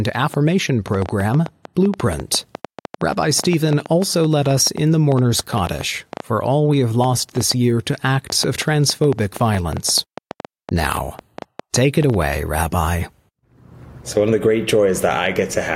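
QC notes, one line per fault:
0.09–12.23 s, train of clicks: around 70 same-shaped pops at about 6.5 per second, unevenly spaced, poking a few dB above the speech and ticking through the pauses too. Likely a faulty connection or nearby equipment injecting pulses into the signal.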